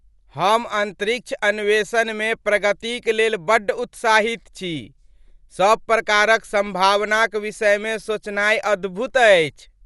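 Dolby Digital compression, likely, runs throughout this speech: nothing remains above 11.4 kHz, and starved frequency lines refilled with noise leave a dull, rough flutter, fitting roughly 64 kbps.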